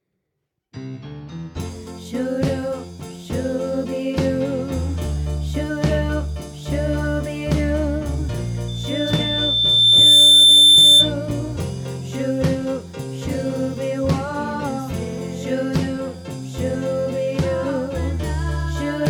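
A microphone is picking up the loudspeaker it feeds, and at one frequency the loop gain climbs past unity, causing loudspeaker feedback squeal from 8.68 to 11.14 s. The sound at 3.5 kHz keeps recirculating and reinforcing itself, so a single piercing tone swells over roughly a second and a half into a squeal that stands around 15 dB above the rest of the audio before it cuts out.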